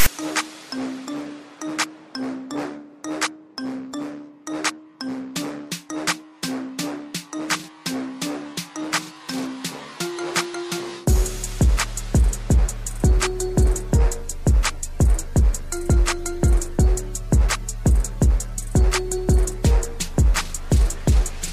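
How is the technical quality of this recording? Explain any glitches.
There is one glitch, right at the start. From 0.00 to 0.06 s, file tags are played as audio: a block of text metadata is decoded as if it were samples. Because text bytes cluster in a narrow value range, the result is a short, loud rasp offset to one side, starting and stopping with hard edges before the real audio begins.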